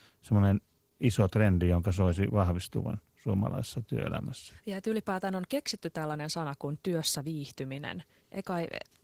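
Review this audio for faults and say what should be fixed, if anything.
Across the whole speech clip the voice sounds hoarse and faintly robotic, with a grainy, smeared quality where the detail of the speech should be. This is Opus voice compression running short of bits. The low band is carried by a linear-prediction coder whose excitation is quantised too coarsely, while the content above 8 kHz gets only a thin transform layer, which fits a hybrid, fullband setting at around 16 kbps in 20 ms frames. To prevent it, encode at a higher bitrate, roughly 24 to 32 kbps or more for fullband speech.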